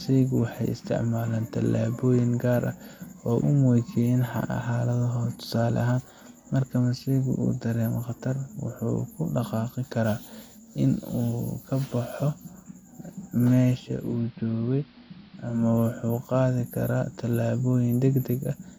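Speech recording with digital radio blending to analogue from 13.79 to 15.75 s: a 427 ms cross-fade to AM drops the level about 3 dB and brings up hiss.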